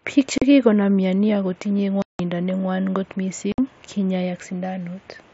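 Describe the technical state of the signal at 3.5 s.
Unconcealed Bluetooth headset packet loss hits from 3.52 to 3.58 s. For about 60 ms, the headset-to-phone voice link drops its packets and silence or an idle pattern fills the gap, consistent with several consecutive short frames lost. The speech breaks into a hard-edged hole.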